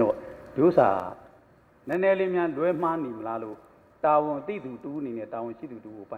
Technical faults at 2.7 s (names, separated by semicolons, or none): none